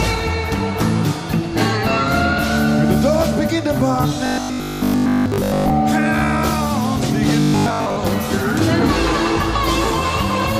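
From 4.26 to 5.70 s and 7.40 to 7.96 s, sound turns into a rigid 50 Hz buzz. This is robotic sound, likely from a repeated 20 ms buffer replacing most audio.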